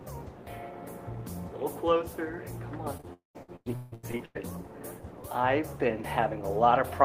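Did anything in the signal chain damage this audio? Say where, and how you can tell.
Yes, the network. Two short concealed packet losses at 2.97–3.01 s and 3.01–3.05 s: the decoder stretched the last sound over each 20 ms hole, leaving a quick smear.

At 3.13 s the sound carries on as a fading buzz, then about 140 ms of silence until 3.37 s, likely a long network dropout with audio never arriving.

Then repeated packet loss from 3.43 to 4.37 s: seven gaps, longest 159 ms, each patched with the previous sound, so roughly 57% is patched and it sounds choppy with pieces missing.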